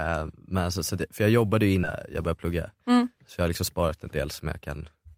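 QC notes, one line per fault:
1.83–1.85 s, skip ahead: right after "för jag jobbade ju" playback jumps forward with no filler. Roughly a second of audio was thrown away while later packets were already queued, so the two sides butt together and the delay drops by about that much.
2.21–3.83 s and 4.45–5.17 s, jitter buffer speed-up: the buffer was running too full, so the receiver kept cutting out tiny pitch-period slices to catch up. The talk runs about 8% then 9% fast at unchanged pitch and sounds a bit hurried, shedding roughly 150 ms and 70 ms.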